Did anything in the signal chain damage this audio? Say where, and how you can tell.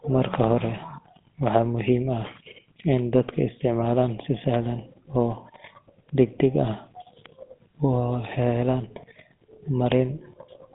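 Yes, at the codec: GSM full-rate coding throughout gives gravelly, buzzy speech from pulse-driven vocal-tract modelling; the spectrogram shows a band from 150 Hz to 3.7 kHz, with nothing above 3.8 kHz.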